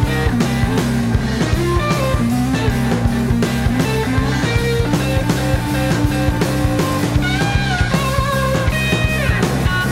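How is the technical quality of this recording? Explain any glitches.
No glitches can be heard anywhere in the recording, and nothing calls for explanation.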